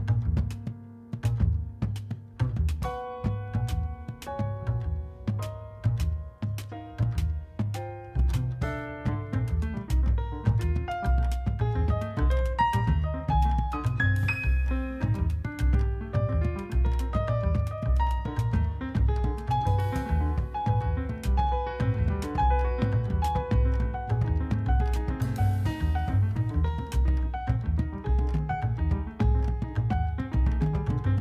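Listening closely turned up nothing that stood out as a technical problem anywhere in the audio.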